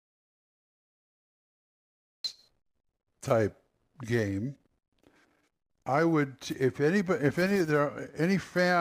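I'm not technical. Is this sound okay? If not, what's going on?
No. The clip opens in an audio dropout to silence: from the start until about 2.25 s there is dead, total silence with no background hiss, then the speech cuts in mid-flow. The input was likely lost briefly, so that opening stretch is simply gone.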